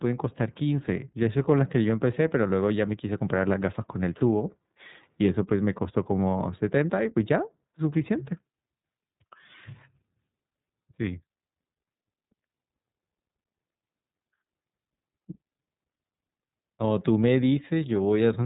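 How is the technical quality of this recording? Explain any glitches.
The recording carries one fault, present from start to finish: iLBC codec coding. Throughout the clip, the speech is band-limited, with nothing above about 3.8 kHz, so sibilants and consonant edges lose their crispness. iLBC codes each frame's excitation independently of the one before, and the plainly audible roughness and slightly synthetic, buzzy texture fit 30 ms frames at around 13.33 kbps. The speech stays clear while sounding boxed-in, thin and coarse.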